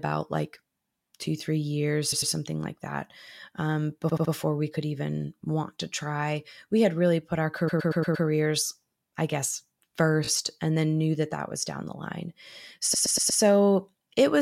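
Speech with repeated frames in five spots: short chunks of compressed audio play again as stutters at 2.11 s (after "like two three years"), 4.08 s, 7.67 s (after "had really put our", the worst, a 116 ms block looping five extra times), 10.25 s and 12.93 s, each adding its loop time to the clip.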